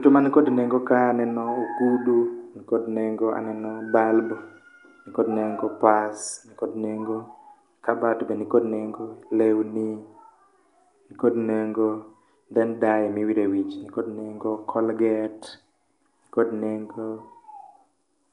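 From start to finish the speech carries a rough, hissy halo and a smeared, underwater quality, with nothing above 10.6 kHz. The likely cause is Nellymoser compression near 44 kbps: each short block gets a fixed bit budget, so weak bands are replaced with noise.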